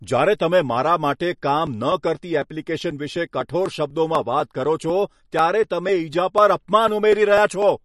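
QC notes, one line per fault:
Throughout: likely MP3 compression. The treble stops sharply at 12 kHz, and the speech has a plainly audible watery, swirly texture. Weak spectral detail is switching on and off between frames, and the result fits a low bitrate of around 40 kbps.
1.18 to 7.62 s: periodic USB or driver dropouts. Regular ticks recur every 0.248 s, about thirty in all. Each one is roughly 2 ms of audio skipped outright, so the waveform jumps and clicks. That pattern points to a driver or bus stall at a fixed interval.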